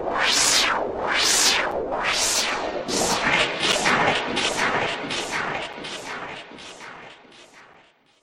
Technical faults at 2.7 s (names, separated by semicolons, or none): none